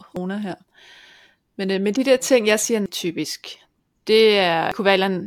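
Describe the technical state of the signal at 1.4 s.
At 1.4 s the speech signal is intact, with no technical fault present at that moment.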